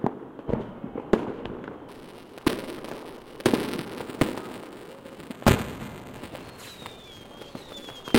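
From 1.89 s to the end, the everyday sounds in this clip carry a steady robotic buzz at 375 Hz that is there only while something is sounding. This is buffer tearing: the software filling the ring buffer and the hardware reading it have slipped out of step, so in every period a small slice, under a tenth, holds audio from one lap earlier, around 5 ms old, joined hard on both sides. The buzz rate fits a 128-sample buffer.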